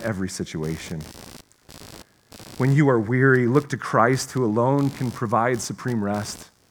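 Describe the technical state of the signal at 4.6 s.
At 4.6 s the computer's processor and peripheral load is shifting the shared audio ground, producing computer activity noise that runs through the whole speech clip: a buzzy, chirping pulse near 70 Hz, sitting roughly 25 dB under the speech and tracking machine activity rather than the talker.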